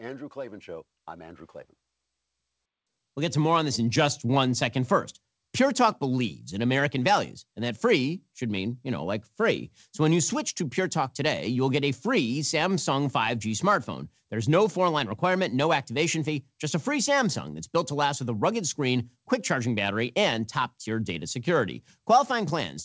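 From 0.33 s to 4.23 s, automatic gain rising lifts the level steadily by about 9 dB. The gain control has judged the input too quiet and ramps it up, so speech and background noise swell together. Nothing sounds above 8 kHz, consistent with a wideband call codec.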